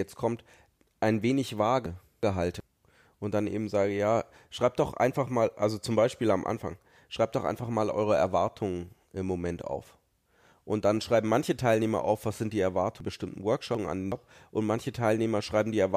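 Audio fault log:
1.86–2.60 s: chunks out of order. A block of about 372 ms plays one block late, after the block that should follow it. Nothing is missing, but the sequence jumps, giving a brief jumbled stretch with three hard joins.
13.00–14.12 s: chunks out of order. A 372 ms block arrives two blocks late, so the displaced section runs longer, with the same three abrupt splice points.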